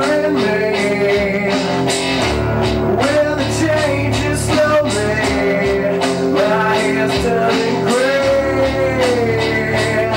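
No dropouts, clicks, distortion or other transport or processing faults can be heard anywhere in the audio.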